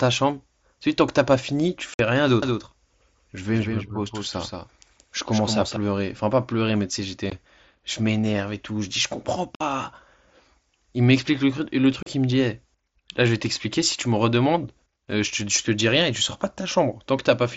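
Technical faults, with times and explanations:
1.94–1.99, 7.3, 9.55–9.61 and 12.03–12.07 s, unconcealed Bluetooth headset packet loss: the sound drops into short holes of 52.5, 15, 52.5 and 37.5 ms, with hard edges. Packets on the wideband mSBC link between headset and phone went missing, and nothing filled the gaps. Those lengths fit whole packets of about 7.5 ms each.
2.42–5.76 s, doubled audio track: a second full-band copy of the sound runs about a fifth of a second behind the first and a few dB quieter. It gives a clean, distinct repeat with no decay or room colour, and it switches on and off abruptly at the edges of this span. The likely cause is the same signal being captured again by a slower path and mixed back in, out of step with the original.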